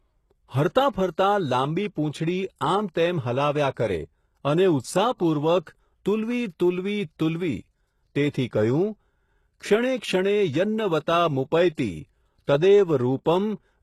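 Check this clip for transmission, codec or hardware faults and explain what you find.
One codec fault runs through the whole recording. Across the speech, sibilants sound gritty and lispy, with nothing above 12.3 kHz. Likely HE-AAC compression at a rate that fits around 16 kbps: the treble is rebuilt by copying lower bands upward under a coarse envelope, so upper harmonics misalign and the damage is plainly audible.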